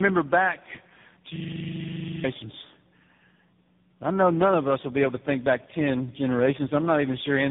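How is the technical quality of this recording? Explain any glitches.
Quality is poor throughout, with tandem speech coding affecting the whole clip. The speech sounds rough, muffled and warbly, which fits about three speech codecs in a row, likely ending in AMR-NB. Each coder re-encodes the previous one's damage. A spectrogram shows nothing above 3.7 kHz and smeared, unsteady harmonics.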